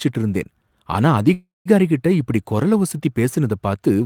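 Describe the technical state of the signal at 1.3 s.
From 1.33 to 1.68 s, after "இருந்தேன் ஆனா", the speech stretches into a fading buzz and then silence. This call audio freeze likely came from delayed packets emptying the jitter buffer.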